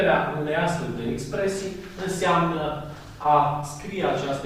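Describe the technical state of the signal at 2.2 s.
At 2.2 s the signal is intact, with no audible technical fault at that moment.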